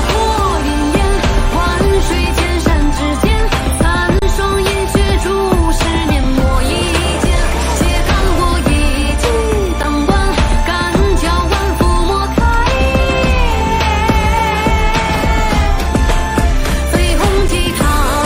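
Underrun with held sample at 4.19–4.22 s, 9.83 s and 17.48 s: the waveform freezes flat, then resumes with the audio from the gap lost.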